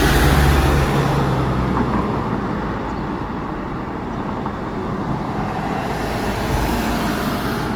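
From start to end, the audio carries plainly audible Opus compression artefacts, likely from encoding in the codec's music (CELT) mode. Bits are scarce, so the encoder fills thin bands by folding lower content upward or by inserting noise. Tonal parts turn grainy, rough and noisy, not swirly. The damage is consistent with a low bitrate near 24 kbps. Bandwidth stays full, with content reaching about 20.1 kHz, so the sound is not muffled.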